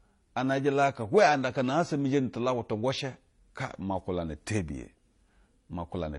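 From start to finish the speech carries two layers of coding damage at once: a dull top with nothing above about 11.4 kHz, smeared, warbly consonants, and a synthetic, hissy shimmer in the upper range. This is likely transcoding between lossy codecs. The grain fits a low-bitrate MP3 pass, and the shimmer fits a later HE-AAC encode that spent its small budget re-coding those flaws and added its own. The lower cut-off survived the chain.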